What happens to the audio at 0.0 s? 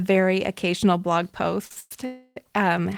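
Nothing goes wrong at 0.0 s; the audio is intact there, with no dropout, click or other fault at that moment.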